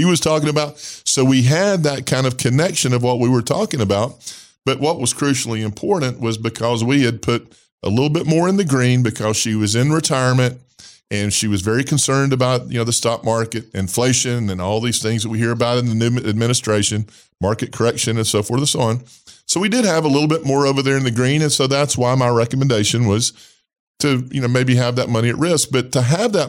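It's a speech clip with one bit error spike at 21.03 s, between "more over there in" and "the green and so": a single sample flipped by a power of two, so you hear one sharp, broadband tick at about -30 dBFS that has nothing to do with the voice.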